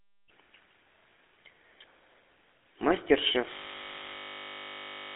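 Throughout, the speech passes through a GSM full-rate codec, which fits a 13 kbps stream. The vocal-tract model driven by sparse pulse excitation leaves a buzzy, gravelly roughness. A spectrogram shows energy confined to roughly 250 Hz to 3.7 kHz, with nothing above 3.8 kHz.

From 3.53 s to the end, a system hang loop takes over. The computer froze while the hardware kept cycling one 20 ms buffer, so the sound becomes a steady 50 Hz buzz. On a waveform this appears as an identical 20 ms shape tiling the final 1.6 s, and on a spectrogram as evenly spaced 50 Hz harmonic lines.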